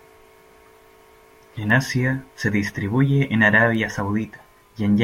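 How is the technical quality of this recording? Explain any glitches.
Two isolated bit error spikes stand out in the speech. The first, at 1.70 s, is a single corrupted sample reaching about -19 dBFS; the second, at 3.75 s right after "se distribuye en", spans two samples at about -25 dBFS. In each case one flipped bit makes the sample value jump by a power of two and snap straight back, so you hear a brief, broadband tick that has nothing to do with the speech around it.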